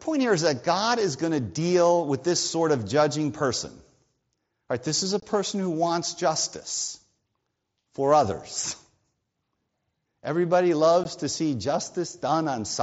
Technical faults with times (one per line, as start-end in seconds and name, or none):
5.20-5.23 unconcealed Bluetooth headset packet loss
11.04 unconcealed Bluetooth headset packet loss